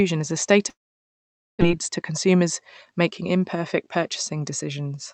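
From 0.69 to 1.63 s the sound breaks off. The receiver stretches the last sound into a fading buzz, and then near silence remains. About 0.82 s of audio is lost for good. The likely cause is a long network dropout.

From 1.70 to 3.12 s comes a jitter buffer speed-up. Delayed audio piled up in the buffer. The receiver cut out short pitch-period pieces many times, roughly 70 ms in all. Playback runs at 105 percent and sounds hurried, but the pitch stays the same.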